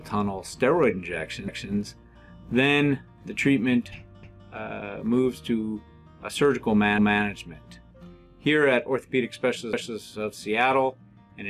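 The audio was cut into 2.5-second chunks that each began before the previous one finished, so overlapping chunks replay a 250 ms stretch at every join. The sound stutters with a short repeat at 1.48, 4.23, 6.98 and 9.73 seconds.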